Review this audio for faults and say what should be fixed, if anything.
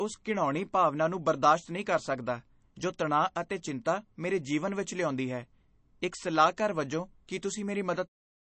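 The speech carries plainly audible MP3 compression damage from start to finish, likely from a low-bitrate MP3 encode. Nothing is left above 8.3 kHz, so the treble stops at a hard ceiling. The encoder ran short of bits and cut the top band at a fixed point. It also dropped quiet frequency lines frame by frame. Those lines flicker in and out, which gives the speech a watery, swirly texture. The damage points to a bitrate near 32 kbps. The smooth fade-out near the end, from about 8.0 s to 8.09 s, is an intended edit. To prevent this, keep the master uncompressed or encode at a much higher bitrate before delivery.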